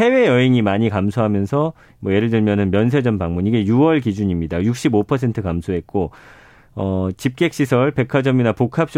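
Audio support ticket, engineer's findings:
No faults found in the speech recording; nothing audible to trace to capture, processing or transport, ticket can close on the audio side.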